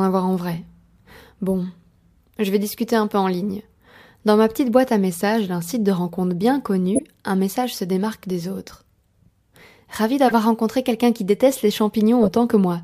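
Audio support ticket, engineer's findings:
Corrupt frame decoded, 6.95–7.02 s, after "site de rencontre bien": loud blip, peaking around -5 dBFS. The decoder played a couple of bit-damaged frames, so misread gains put energy at the wrong frequencies.

Corrupt frame decoded, 10.28–10.34 s, before "rencontré quelqu'un qui déteste": a burst around -10 dBFS from a few damaged frames.

Corrupt frame decoded, 12.23–12.32 s, after "quelqu'un qui déteste les": a noise burst around -10 dBFS across several damaged frames.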